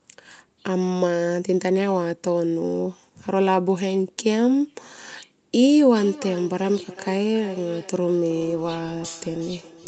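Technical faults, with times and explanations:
5.95 to 9.88 s, feedback echo between two devices: speech returns roughly every 0.4 s at about −18 dB, thinner and ringing, unlike a single room reflection.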